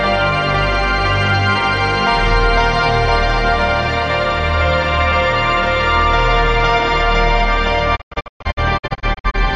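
A music clip with a digital broadcast dropout near the end: from 7.95 s to 9.36 s the sound keeps vanishing in short holes, each faded down over about 20 ms, the longest lasting 120 ms. In all, about 600 ms goes missing across that 1.37 s stretch, which points to a couple of dozen frames failing their checks. The receiver mutes each time and only comes back once good frames return, so the missing music is simply gone.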